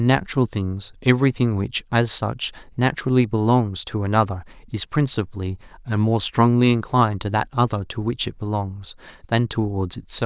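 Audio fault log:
No fault to log.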